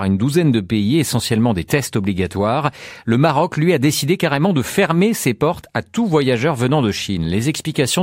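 No technical faults occur in the recording at any point, so there is nothing to describe in time order.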